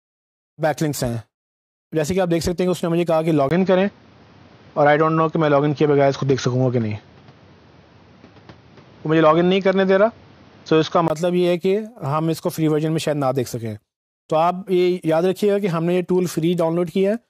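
The recording input was likely switched to a poorer device from 3.49 s to 11.1 s, with a brief gap of about 20 ms at the changeover. Across that stretch the band stops near 6.6 kHz, so the audio turns dull and boxy. The level shifts by roughly 5 dB, and a new background noise floor appears, sitting around 30 dB under the signal. At 11.1 s the fuller, cleaner sound returns.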